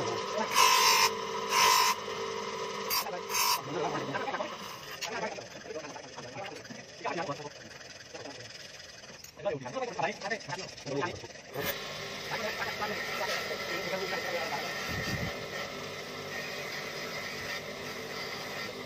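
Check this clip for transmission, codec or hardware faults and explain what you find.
No faults of the kinds asked about can be heard here. There is nothing to report at any point in the audio.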